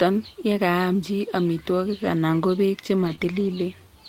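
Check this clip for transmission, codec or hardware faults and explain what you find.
Transmission faults are present: lost packets rebuilt from error correction, and one short concealed packet loss.

Lost packets rebuilt from error correction occur at 2.01 to 2.07 s, between "yekaam chi amitwogik" and "anan ko beek"; at 3.03 to 3.13 s, after "amitwogik anan ko beek"; and at 3.19 to 3.57 s. Packets went missing, but later packets carried low-bitrate backup copies, and the decoder played those instead. There is no gap. Those stretches sound rougher and noisier. The last one is longest and points to ten separate lost packets.

A short concealed packet loss sits at 3.15 to 3.19 s, also after "amitwogik anan ko beek". About 20 ms never arrived. Here, no backup copy existed. The decoder extended the preceding sound to cover the hole, then blended back into real audio. It comes across as a brief smear or wobble, squeezed between two rebuilt stretches.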